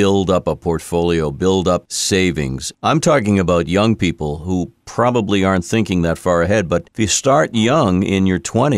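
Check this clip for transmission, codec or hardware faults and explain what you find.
No transmission, codec or hardware fault can be heard anywhere in the speech, which keeps a steady, continuous signal throughout.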